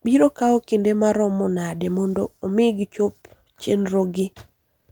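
From the start of the speech there is clock drift between sender and receiver: the sender's audio clock runs a few percent fast, roughly 4 percent, so samples arrive slightly quicker than the receiver plays them out. Its jitter buffer keeps creeping fuller and must shed material to keep latency in check. On a waveform the envelope looks normal at a glance, but closer inspection shows small splice points scattered through the clip rather than one clean edit.

Those splices are the repeated timing corrections, running from 0.15 s to 4.75 s. Because the sender is ahead, each correction drops a short slice of audio, all in the same direction, at uneven spacing, netting playback at about 104 percent speed. By ear they come across as faint hiccups and a slightly hurried, unsteady tempo. A spectrogram shows occasional thin vertical seams where harmonic lines jump abruptly, and the waveform shows matching tiny discontinuities in phase or amplitude.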